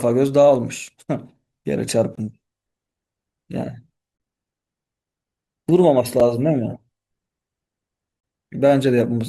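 Each 2-second stream segment's timestamps end slightly before the next one begins, so the player bridges the gap between stream segments with inserted silence. The speech drops into hard-edged holes at 2.15–2.18 s (about 22 ms), 4.18–4.20 s (23 ms), 6.20 s (a brief 5 ms hole) and 8.20–8.23 s (30 ms), recurring roughly every two seconds. The sound on either side is intact, and the holes only push what follows later.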